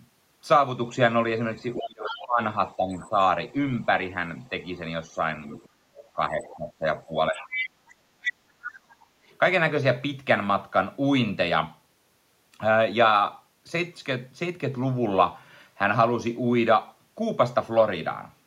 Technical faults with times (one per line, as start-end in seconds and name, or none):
1.77-4.49 other side's voice leaking through
1.80-3.54 speech suppressed in double talk
5.15-8.95 speech suppressed in double talk
5.48-8.31 other side's voice leaking through
9.23-9.27 background gated by the echo canceller